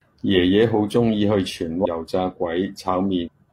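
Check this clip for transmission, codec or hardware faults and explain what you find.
Two faults stand out, both damaged data in a compressed stream. The first runs from 1.81 to 1.86 s. The second runs from 3.22 to 3.28 s. In each spot, part of the coded speech is corrupted. The decoder misreads those frames, loses its place, and hunts for the next valid frame header. Each one is heard as a short chirp, squawk, click or hole breaking into the speech, lasting roughly 40 to 60 ms.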